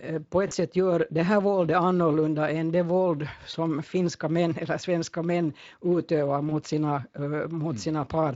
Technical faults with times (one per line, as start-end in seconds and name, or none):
0.47-0.54 VoIP packet loss concealed by the speech codec
3.51-3.56 VoIP packet loss concealed by the speech codec
6.49-6.52 VoIP packet loss concealed by the speech codec